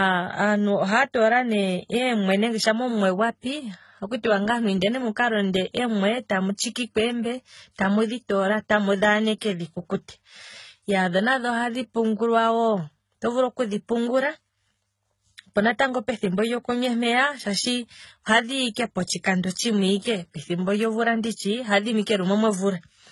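Throughout the speech, nothing reaches above 11.8 kHz, and different artefacts pile up together, heard at the same time. The likely cause is transcoding between lossy codecs, apparently MP3, then AAC, then low-rate HE-AAC, each encode adding its own damage.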